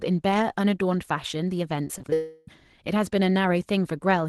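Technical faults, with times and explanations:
1.84–2.13 s, repeated packet loss (robotic sound): five brief gaps, longest about 21 ms, each patched by repeating sound, so about a quarter of this span turns choppy.
2.14–2.48 s, long network dropout: one unbroken, smeared buzz or hiss replaces about 0.34 s of sound without falling silent, likely from a single long loss rather than scattered short gaps.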